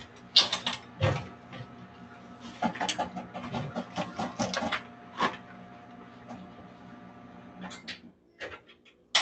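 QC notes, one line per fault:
throughout: noise suppressor applied to sounds; tuned for speech, it treats held tones and tails as noise, so the waveform keeps its attacks while sustains sag about 10 dB and pump.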